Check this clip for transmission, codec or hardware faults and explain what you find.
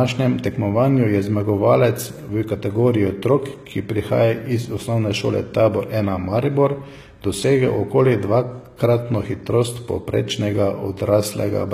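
One codec fault runs through the whole speech clip: plainly audible damage from what is likely HE-AAC compression, which fits a low bitrate of around 20 kbps. Only the lower spectrum is coded; the treble is rebuilt by copying lower bands upward under a coarse envelope, so its harmonics no longer align across the crossover. S sounds come out gritty, metallic or lispy. A spectrogram shows the upper band as a smeared, repeated copy of the lower band, with a visible seam at the crossover.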